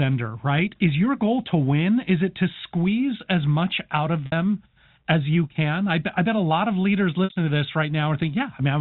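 At 4.26 to 4.32 s and again at 7.24 to 7.30 s, packet loss with pitch repetition briefly holds the speech on a slightly buzzy, sustained tone. Each 60 ms gap, which fits three 20 ms packets, is bridged by repeating the last pitch period and fading it out. Unlike a plain dropout, there is no hard silence, and unlike a stutter, no whole syllable repeats. The telephone-band G.711 coding underneath stays clean.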